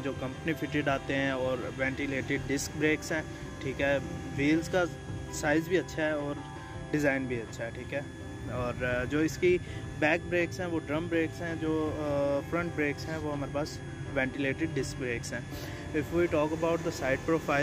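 A switching supply whistle runs throughout: a thin tone wandering between 1.57 and 1.74 kHz, roughly 25 dB below the sound, showing as a drifting horizontal spectrogram line.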